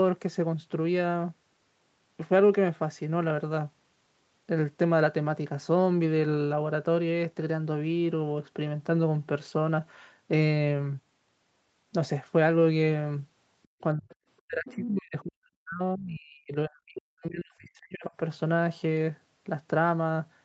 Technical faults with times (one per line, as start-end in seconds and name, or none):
13.63-13.81 other side's voice leaking through
13.94-14.10 speech suppressed in double talk
14.11-14.15 other side's voice leaking through
14.45-18.13 speech suppressed in double talk
14.68-14.87 other side's voice leaking through